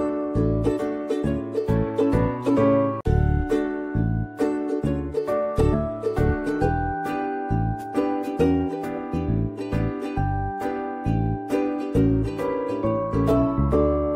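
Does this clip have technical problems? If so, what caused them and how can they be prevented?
No, nothing stood out as a technical problem on listening to this clip.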